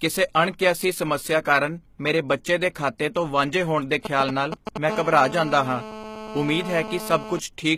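Speech with a gritty, metallic treble throughout that stops at 14.9 kHz; s sounds come out lispy and plainly damaged, most likely from HE-AAC compression at a low bitrate near 20 kbps, where the top band is rebuilt by copying lower bands upward rather than coded, so harmonics no longer line up above the crossover. Right after "ਵਾਂਝੇ ਹੋਣ ਦੇ", from 4.05 to 4.78 s, a galloping dit-dit-dit of short 217 Hz buzzes cuts in, nearly as loud as the speech. These are GSM signalling bursts: a nearby 2G phone sending brief groups of radio bursts, as it does before a call or text arrives, which the audio circuit rectifies into sound. At 4.65 s an attack is preceded by a brief hiss and sounds smeared. This is pre-echo spread over about 15 ms: the codec spread quantisation noise sized for the loud attack across its whole block, including the quiet moment just before it. From 4.89 to 7.39 s a hard, raspy, steady buzz at 217 Hz, rich in harmonics and unrelated to the speech, sits about 12 dB below it. 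This is GSM phone buzz from a nearby 2G phone in a call, transmitting 217 bursts a second that the circuitry rectifies.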